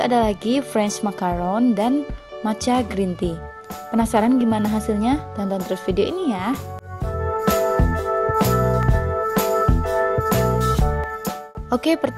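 From 2.20 s to 11.04 s there's a click about every 2.21 s, five or so in all. That steady spacing points to clock drift buffer slips, likely from two clocks disagreeing by around 150 ppm, so a short block of roughly fifteen samples gets dropped or repeated each time.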